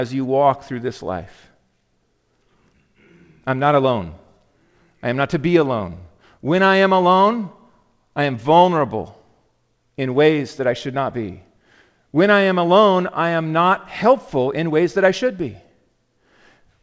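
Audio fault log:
Nothing stood out on listening to the speech, which carries the expected character of a G.722 call path at 64 kbps with no content above 8 kHz.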